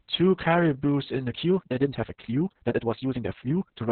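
Throughout the speech, Opus voice compression squeezes the band to nothing above 4.3 kHz and coarsely codes the excitation, leaving a muffled, hoarse, faintly robotic tone. That heavy damage points to the SILK coder at around 6 kbps, unlike a plain low-pass, which would dull without roughening.

From 1.24 s to the end, a time-stretched section speeds the pace to about 1.84 times while pitch stays put, sounding rushed. It was likely made by dropping short pieces to fit a length. A simple speed-up would also have raised the pitch.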